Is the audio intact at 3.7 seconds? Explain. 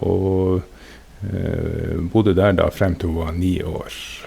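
Yes, the speech at 3.7 seconds is intact, with no audible fault at that moment.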